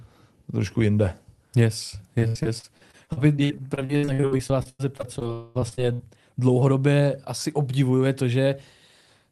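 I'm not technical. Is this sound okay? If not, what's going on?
No, there are two problems in this speech clip.

From 2.19 to 6.01 s, just before "dlouhodobě asi obdivuje to", there is repeated packet loss (robotic sound). Small chunks of audio kept failing to arrive, about 30 times, none longer than a tenth of a second. Each time, the call filled the hole by stretching the last bit of sound, so about a quarter of that stretch is patched. That makes it choppy and robot-like, with pieces of speech missing.

Between 5.33 and 5.57 s sits something different: one long network dropout, a single hole of about a quarter of a second instead of many tiny ones. This one is likely a longer network hiccup. It never goes fully silent. The last sound is stretched over the entire gap as a smeared, droning filler, and the speech resumes afterwards without the part that was lost.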